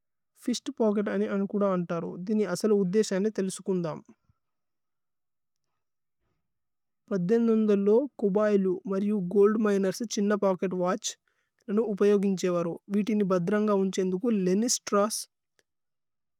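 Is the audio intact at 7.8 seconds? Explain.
Yes, the speech at 7.8 seconds is intact, with no audible fault at that moment.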